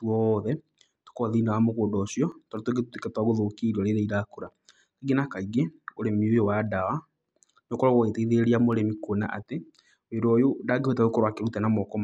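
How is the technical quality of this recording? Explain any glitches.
The speech is marred by two bursts of CD scratch ticks, from 2.32 to 3.33 s and from 8.73 to 9.73 s. Each burst has five short ticks, about five per second, the longest lasting a couple of milliseconds. A surface blemish exceeds the disc's error correction once per revolution, so the player interpolates or mutes the damaged samples, producing regular clicks.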